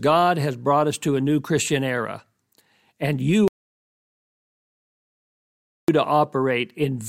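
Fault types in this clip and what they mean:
Audio dropout to silence: the speech cuts to silence from 3.48 to 5.88 s, likely a lost input, leaving a flat waveform and blank spectrogram.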